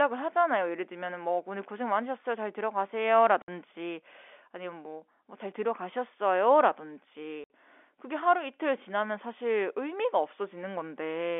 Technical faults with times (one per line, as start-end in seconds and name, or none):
3.42-3.48 packet loss filled with silence
7.44-7.50 packet loss filled with silence